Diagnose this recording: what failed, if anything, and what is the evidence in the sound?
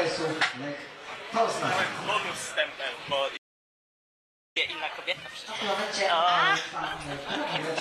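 A playback stall at the player stage: the sound stops dead at 3.36 s and stays silent for about 1.19 s until 4.57 s, then resumes where it left off. The cause is likely buffer underrun or a blocked playback thread. Unlike a network dropout, no material is skipped.

Catch-up at higher speed follows at 4.57 s. The player resamples its backlog at 1.1x until 7.57 s, so speed and pitch both rise by about a semitone and a half, then settle. It is tied to the stall, which rules out a steady clock or sample-rate mismatch.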